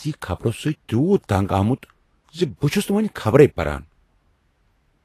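From start to finish the speech sounds hissy and grainy, with nothing above 14.2 kHz, which points to a bitrate around 33 kbps and likely Vorbis compression. The hiss comes from coarsely quantised treble replaced by similar-energy noise; unlike added broadband noise, it tracks the sound and vanishes in gaps.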